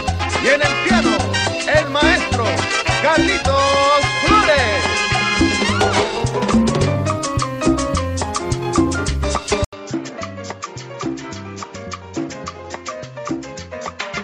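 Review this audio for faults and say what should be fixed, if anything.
At 9.65 s the sound drops out for 80 ms. It returns duller and boxier, and stays that way to the end. Nothing above 7.6 kHz remains. The level falls by roughly 5 dB. A new background noise sits around 35 dB below the signal. The likely cause is an input switched to a poorer device mid-recording, such as another microphone or a headset call profile with a narrower band. To prevent it, lock the recording input to one device and disable automatic device switching.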